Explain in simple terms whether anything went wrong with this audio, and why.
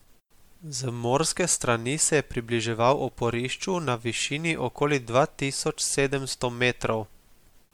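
The speech was likely re-saved as MP3 about four times, causing generation loss: throughout, it sounds swirly, hollow and smeared, with blurred attacks.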